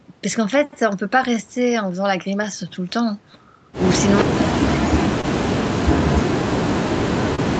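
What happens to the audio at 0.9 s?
At 0.9 s the audio is inside a stretch of repeated timing corrections running from 0.54 to 3.32 s. The receiver keeps stretching the sound by repeating tiny pieces, slowing it to about 99% speed and adding roughly 50 ms overall. This is heard, if at all, as slight hiccups or an unsteady tempo. Unlike packet loss with its gaps and muffled fills, these are small, unevenly spaced edits that all lengthen the sound.

The cause is clock drift between sender and receiver. The sender's clock runs about 1.5% slow, so the jitter buffer keeps running low and the receiver must pad it. This is a steady mismatch with corrections in one direction, rather than random jitter.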